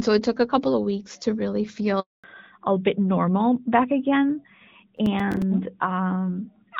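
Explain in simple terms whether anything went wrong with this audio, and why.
Three things went wrong. First, a handover gap: the phone switched the call to a different network, and no sound got through. Right after "of weeks to really", the audio falls silent from 2.00 to 2.24 s, about a quarter of a second.

Second, after that switch at 2.24 s, the call dropped from HD Voice to an older narrowband codec. This fallback to narrowband removes everything above 4 kHz for the rest of the clip, so it sounds duller and rougher.

Third, from 4.97 to 5.42 s there is processor overload crackle. The phone was too busy to finish several tiny chunks of audio on time, and each miss left a brief hole of silence a few milliseconds long, heard together as gritty crackling.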